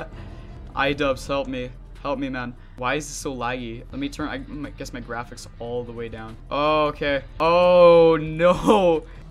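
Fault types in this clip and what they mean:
No technical faults can be heard anywhere in the clip. There is nothing here to list under any fault type.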